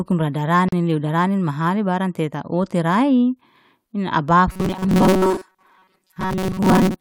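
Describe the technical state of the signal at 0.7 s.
A gap at a join of encoded pieces sits at 0.69 to 0.72 s, an about 39 ms gap cut into the speech just before "lew darani mahani barang". Separately encoded segments were spliced untrimmed, leaving encoder delay and end padding in place, so the sound drops out, with smeared edges, then resumes where it stopped.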